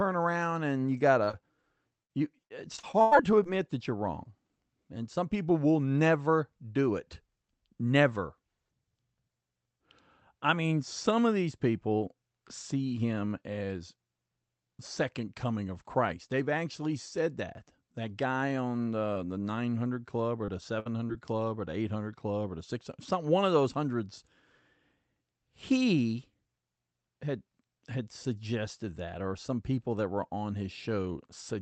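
At 1.23 to 1.29 s and again at 1.31 to 1.35 s there is short concealed packet loss. About 40 ms and then 20 ms of audio arrived too late, and the receiver patched each hole by extending the preceding sound. The result is a brief smear, not a clean dropout or click.

From 2.03 to 3.59 s the trouble becomes repeated packet loss with a robotic sound. Nine gaps follow one another closely, the longest 100 ms, and about a fifth of the stretch is synthetic fill. Unlike the isolated smears, the patches pile up into a choppy, robotic texture with fragments missing.

Short concealed losses of about 20 ms return at 19.13 to 19.17 s and 20.45 to 20.50 s. Then, at 20.80 to 20.87 s, a burst of packet loss removes about 60 ms in one run. That is long enough for the concealment to fade, leaving a held buzz or dying hiss before the audio resumes further on. This distinguishes it from the quick, single smears on either side.

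A final short concealed loss of about 20 ms falls at 21.07 s. Throughout, the call codec's band limit at 8 kHz takes the top off the high frequencies.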